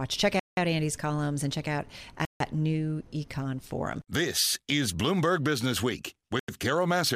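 At 0.40 s the speech cuts to dead silence for 176 ms, again at 2.25 s, just after "columns and check out", for 152 ms, and at 6.39 s for 90 ms. These are most likely Bluetooth stalls: the headphone buffer emptied while delayed packets were resent. Unlike codec packet-loss concealment, which fills gaps with smeared or buzzy substitute sound, each gap here is clean, total silence before the speech picks up again.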